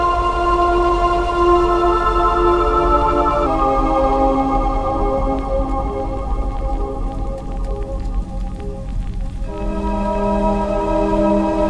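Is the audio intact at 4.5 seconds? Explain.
No. From 3.47 s to the end, a wrong sample rate slows the sound to about 0.92 times its speed and lowers the pitch by about 1.5 semitones, which fits 24 kHz audio played at 22 kHz. Unlike a pitch shift or time-stretch, speed and pitch drop together.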